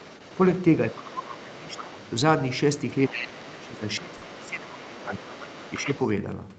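Other side's voice leaking through runs from 0 to 0.35 s and again from 0.54 to 2.14 s. A second voice sits faintly under the speech, roughly 25 dB down. It is likely the far end playing on a loudspeaker and reaching the microphone, with the echo canceller failing to strip all of it out. It recurs from 2.77 to 3.46 s much more plainly, only about 10 dB below the talker. It returns faintly from 3.76 to 4.5 s and from 4.67 to 6.08 s, at roughly 20 to 25 dB down.

Speech suppressed in double talk covers 0.93 to 2.0 s and 3.09 to 5.24 s. In those stretches the talker's level sinks by as much as about 20 dB. A much milder dip of about 5 dB appears at 5.76 to 5.88 s. The cause is likely the echo canceller mistaking overlapping talk for echo and pulling the talker down together with the leaked voice.

Short concealed packet loss hits at 3.29 to 3.33 s, where 20 ms went missing, and at 4.17 to 4.23 s, where 40 ms went missing. 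The receiver bridged each gap by extending the preceding sound and then blending back into the real audio, which leaves a brief smear or wobble inside the already ducked speech. Throughout, the Opus call path caps the audio at 8 kHz, at a bitrate near 40 kbps.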